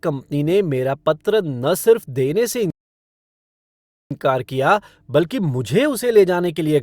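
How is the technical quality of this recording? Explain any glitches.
The recording has one clear glitch, a rebuffering stall. At 2.70 s, right after "न सिर्फ देने से", the speech cuts to silence and stays silent until 4.11 s, adding about 1.40 s. The player ran out of downloaded audio and simply waited for more data. What separates it from a dropout is that nothing is missing: speech picks up exactly where it halted, continuing with "कर दिया बल्कि", so the gap adds time rather than removing any.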